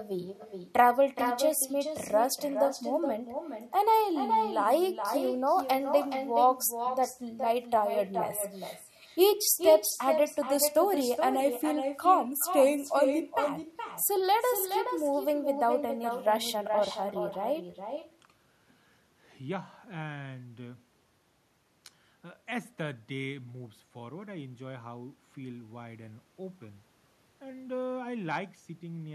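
Throughout the speech, an echo with no canceller is present: the far end's loudspeaker output re-enters its microphone and returns unremoved. Each phrase is trailed, roughly 400 ms later, by a thinner copy sitting about 7 dB below the direct sound.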